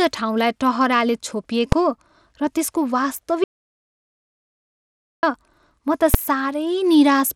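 Throughout the speech the treble is thin and unsteady, with a gritty noise layered over it, likely Bluetooth SBC compression at a low rate of around 96 kbps. At 1.72 s and again at 6.14 s there is a single sharp bang, invalid numbers at full scale. A short block of roughly 3 ms and then 6 ms, consistent with 128-sample and 256-sample blocks, was driven to the maximum level. From 3.44 s to 5.23 s the sound stops dead for about 1.8 s with no room tone, an audio dropout to silence, likely from the input being lost while silence was written.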